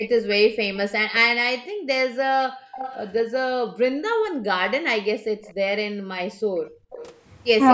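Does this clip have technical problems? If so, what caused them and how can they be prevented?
Yes. Echo leak appears at 0.0–0.22 s, 2.76–3.11 s, 5.26–5.53 s and 6.67–7.16 s as a faint copy of the speech trailing by 245 ms, roughly 15 to 35 dB below it. The likely cause is a far-end loudspeaker whose echo canceller let part of the returned signal slip back into the call. A headset at that end, or lower speaker volume, prevents it.

Background gated by the echo canceller occurs at 1.67–2.12 s, 2.48–2.76 s and 5.94–6.9 s, where the room sound briefly collapses by about 36 to 40 dB and then returns. The canceller clamps the microphone while the loudspeaker plays and releases it afterwards. Gentler suppression settings, or a headset, avoid these dropouts.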